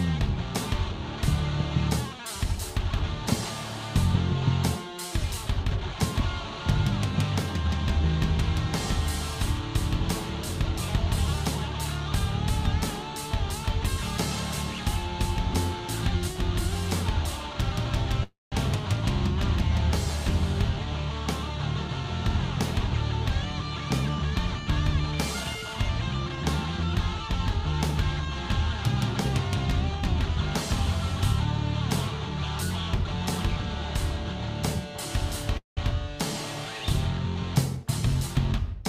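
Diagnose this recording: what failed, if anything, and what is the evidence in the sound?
At 18.23 to 18.54 s and 35.57 to 35.79 s the sound stretches into a fading buzz, then silence, for about 0.28 s and 0.2 s, then resumes with nothing lost. This is a call audio freeze at the network stage, likely from delayed packets draining the jitter buffer.

From 22.85 to 24.71 s, 25.11 to 26.37 s and 37.77 to 38.83 s the audio runs hurried at unchanged pitch, about 6%, 8% and 6% fast. This is a jitter buffer speed-up: the receiver cut short pitch-period slices, roughly 0.15 s, 0.1 s and 70 ms in total, to shed excess delay.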